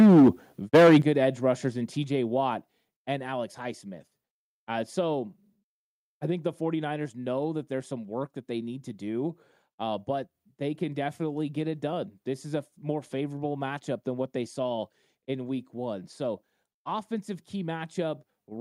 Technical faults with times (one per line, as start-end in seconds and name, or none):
0.00-0.29 microphone overload
0.74-0.98 microphone overload
1.02 microphone volume stepped down
2.04 microphone volume stepped down